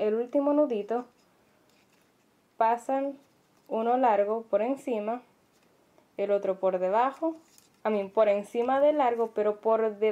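No technical faults can be heard anywhere in the clip. Nothing in the audio points to a problem in the recording or playback chain.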